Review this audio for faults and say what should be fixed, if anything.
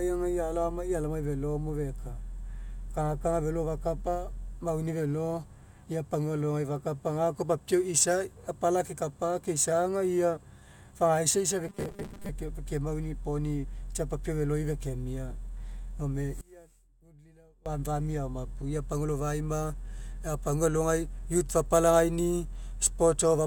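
From 11.68 to 12.29 s the speech turns into a rigid metallic 200 Hz buzz, likely robotic sound from repeated short buffers: 5 ms chunks looping in place of about half the real audio. Deeper buffering or steadier delivery upstream would stop playback running dry.

From 16.41 to 17.66 s the speech collapses by about 25 dB to a faint residue, likely one channel inverted, cancelling everything common to both sides in the mono sum. A polarity check on each channel before mixing down would catch this.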